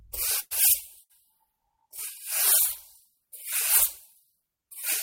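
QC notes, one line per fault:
0.39–0.53 s, call audio freeze: the sound stops moving forward and the last moment is continued as a fading buzz or hiss that ends in about 20 ms of silence. The likely cause is a jitter buffer that ran empty while packets were held up. When they arrive, playback resumes exactly where it paused. About 114 ms of fill is inserted, nothing is lost, and everything afterwards runs 114 ms later.
1.03–1.12 s, short stall from a late packet: one packet missed its playout time. The receiver stretched the preceding sound for about 68 ms until the packet arrived, giving a held sound with a slight buzz or dip. The audio then continues from the same point with nothing missing, but it is delayed by a further 68 ms.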